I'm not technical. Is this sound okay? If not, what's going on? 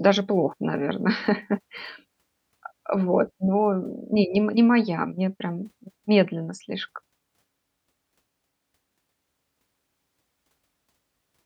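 Yes, nothing in this speech recording points to a technical problem. There is nothing here that needs fixing.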